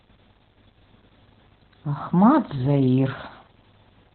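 From start to finish this speech has heavy Opus voice compression: the SILK coder in narrowband mode, with nothing above about 4.2 kHz, so it sounds muffled and phone-like. The coarse excitation coding adds a hoarse, slightly robotic edge, which points to something around 8 kbps.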